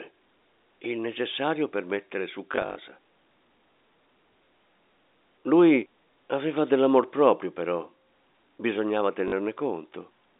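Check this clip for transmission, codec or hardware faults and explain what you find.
Two stretches of packet loss with the last packet repeated affect this speech, carried over a narrow telephone band of roughly 250 Hz to 3.7 kHz by G.711 coding. From 2.52 to 2.76 s, just after "necessario per mettere su", about 140 ms goes missing in scattered gaps, the longest 40 ms. At 9.28 to 9.32 s, 40 ms is lost. The receiver replays the previous block, whose spacing fits 20 ms packets. The repeats ignore the pitch cycle, and the runs give a brief robotic stutter with a 50 Hz buzz. On a spectrogram this shows as short frozen slabs of identical harmonics with thin vertical click lines at their edges. In the waveform it appears as copied segments with abrupt steps at the seams.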